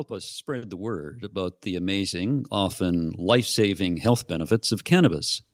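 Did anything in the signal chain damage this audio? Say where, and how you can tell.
Yes. The automatic gain rising happens in the call processing stage. From 0.08 s to 4.61 s, speech and background swell together by about 12 dB. The AGC judged the input too quiet and slowly raised its gain.

A short stall from a late packet comes from the network. At 0.57 to 0.64 s, a sound is held about 50 ms too long, with no speech lost. The jitter buffer ran empty, stretched the last audio, then resumed 50 ms later.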